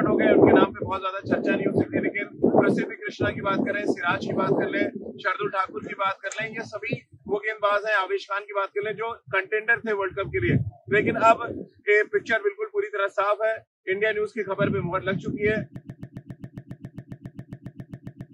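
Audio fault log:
15.76 s to end: broken-record loop. A fragment of about 136 ms repeats exactly, back to back, 19 times until the clip ends. The likely cause is a stalled player or stream resending its last buffer. Whatever should have played there is lost.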